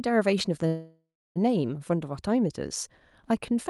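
From 0.67 s to 1.38 s the speech stops and is replaced by a call audio freeze: the last sound carries on as a fading buzz or hiss and then drops to silence for about 0.28 s. This is likely packets held up in transit, leaving the jitter buffer empty. When the speech resumes it continues where it stopped, with nothing lost, but about 0.68 s of delay has been added. The call path's band limit sits near 12 kHz throughout.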